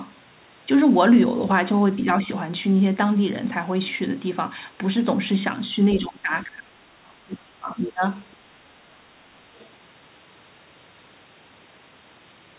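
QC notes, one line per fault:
5.90–5.97 s and 9.55–9.69 s, other side's voice leaking through: brief faint second-voice scraps, roughly 20 then 30 dB below the talker, likely loudspeaker echo the canceller left behind.
5.95–6.76 s and 7.25–8.03 s, speech suppressed in double talk: the talker's level dips by roughly 20–25 dB, likely because the echo canceller turned down both sides during overlapping talk.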